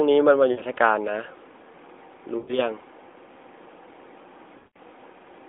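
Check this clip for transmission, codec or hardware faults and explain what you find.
The speech has three dropouts from lost AMR speech frames, at 0.52 to 0.61 s (60 ms), 2.38 to 2.60 s (100 ms) and 4.58 to 4.78 s (180 ms). Each sounds smeared, trailing off toward silence, with the longest fading nearly out. Corrupted frames made the decoder repeat the last good pitch and vocal-tract settings at falling gain; the lengths fit runs of about three, five and nine 20 ms frames. The narrowband mobile codec's 300 to 3.6 kHz line band can be heard throughout.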